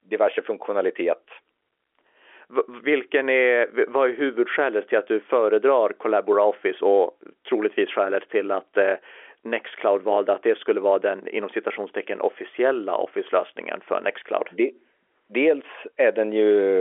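Nothing technically wrong can be heard in this speech recording. It comes through G.711 mu-law telephone coding at 64 kbps, so it has the narrow sound of a phone line, roughly 300 Hz to 3.4 kHz, with nothing above about 3.7 kHz.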